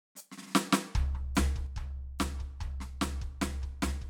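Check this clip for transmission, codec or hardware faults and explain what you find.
One fault is present: a sudden gain jump at 1.67 s, after which the music drops by about 6 dB and stays there to the end. The level changes between adjacent samples with no ramp, so music and noise floor fall together, most likely from an abruptly applied gain setting or bit shift.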